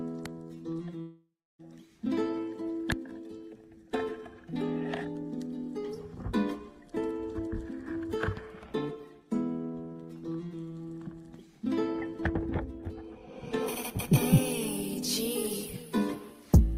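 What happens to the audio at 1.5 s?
At 1.5 s there is near silence. From 1.01 s the last sound smears into a fading buzz or hiss, then goes quiet until audio resumes at 1.61 s. The likely cause is a long network dropout: about 0.58 s never arrived, and the receiver concealed the gap before falling silent.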